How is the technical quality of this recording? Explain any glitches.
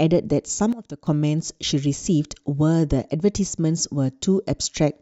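The recording has one clear glitch, a sudden gain jump. From 0.73 to 1.07 s the speech and its background noise both drop by about 12 dB at once, then snap back. A gain setting likely applied without a ramp. Because the noise floor falls together with the speech, this is a gain step rather than someone speaking more softly.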